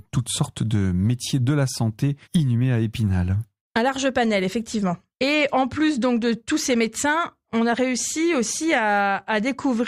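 No technical faults are audible.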